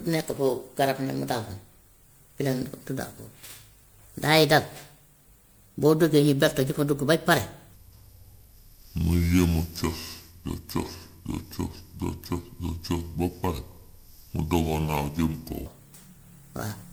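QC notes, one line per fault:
throughout: generation loss. Swirly, hollow and smeared, with blurred attacks, likely from repeated MP3 re-encoding, around seven passes at 128 kbit/s, stacking quantisation noise and spectral holes.
7.74–15.66 s: section at the wrong speed. Sound turns deep and sluggish, about ten semitones lower, playing at 0.61× speed, likely from being fitted to the wrong clock.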